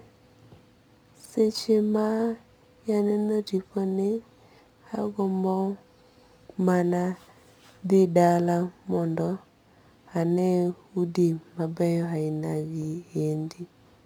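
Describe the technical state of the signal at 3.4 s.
Crude rate conversion at 3.4 s, as throughout: nearest-sample repetition, consistent with a 44.1 to 48 kHz change, leaves gritty inharmonic fizz about 35 dB below the speech.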